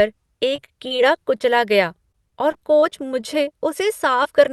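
Repeated packet loss (robotic sound) affects this speech clip from 0.51 to 1.00 s and again from 2.12 to 3.25 s. Audio kept arriving too late or not at all, and each hole of up to about 25 ms was patched by extending the preceding sound. The patches come in quick succession, making those stretches choppy with pieces missing. Short concealed packet loss also occurs at 1.38–1.42 s and 4.23–4.27 s. Each is a single dropout of roughly 20 ms that was bridged by continuing the last pitch or noise and then crossfading back, leaving a brief smear or wobble.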